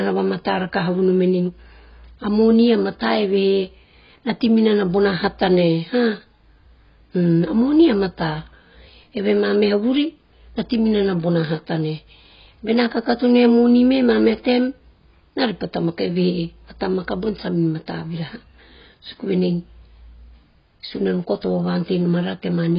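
Throughout, the speech sounds dull and smeared, cut off above 5.2 kHz with fizzy sibilants, likely from heavy AAC compression at a very low bitrate.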